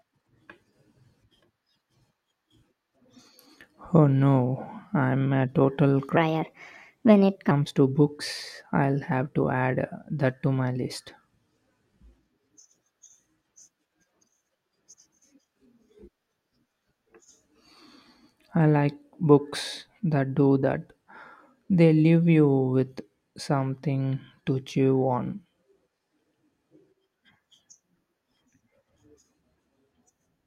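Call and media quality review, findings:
Section at the wrong speed, 6.17 to 7.51 s. Speech runs 1.28x fast for about 1.3 s, pitch raised roughly four semitones, tempo hurried, then snaps back to normal. Speed and pitch shift together, so no time-stretching is involved. Likely cause: playback or resampling stage clocking this segment at the wrong rate. Suspect buffer or stream rate mismatch.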